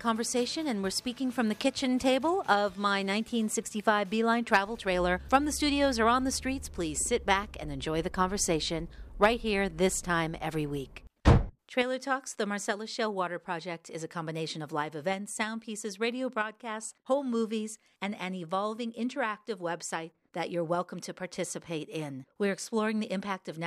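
Nothing here catches the ear as a technical fault at any point, so there's nothing to flag.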